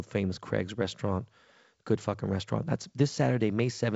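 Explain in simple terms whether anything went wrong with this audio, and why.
Nothing went wrong: the speech comes through wideband telephone coding (G.722) as intended, which simply leaves nothing above about 7.7 kHz.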